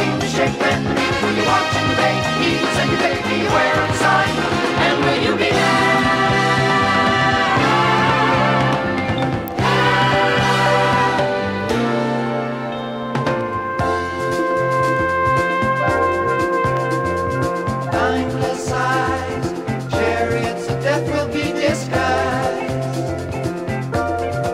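At 9.48 s there is an electrical switching spike: a sharp snap, peaking at about -10 dBFS, sitting on top of the sound rather than replacing it. The likely cause is a nearby switch or static discharge arcing briefly and coupling into the audio line.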